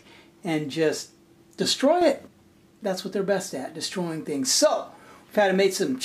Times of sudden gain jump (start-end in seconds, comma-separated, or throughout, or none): 2.01-2.27